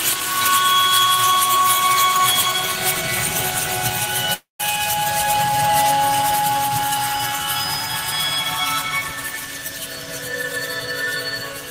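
From 4.33 to 4.61 s the stream most likely suffered a long network dropout: packets stopped arriving and about 260 ms of audio never reached the player. The receiver tried to cover the gap by extending the last received sound, which turns into a fading buzzy hiss before collapsing into roughly 150 ms of silence. When the audio resumes it simply carries on from later material, so the lost portion is skipped rather than delayed.

Between 6.13 and 8.83 s the sound is most likely a doubled audio track, where a second copy of the same signal, picked up through a slower path or left misaligned in an edit, is mixed back in. That copy trails the original by about half a second and sits about 5 dB lower, full-band and dry, with no reverberant tail. It cuts in and out abruptly at the edges, producing a flat echo of everything in that span.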